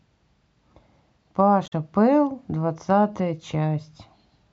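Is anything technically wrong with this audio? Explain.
Yes. From 1.63 to 1.73 s the speech has damaged data in a compressed stream. Corrupted bytes make the decoder misread the affected frames and lose sync until it finds a valid frame header, which produces a brief chirp, click or short hole lasting about a tenth of a second.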